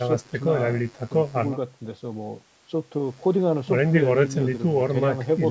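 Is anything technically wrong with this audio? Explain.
No, nothing technically wrong can be heard here.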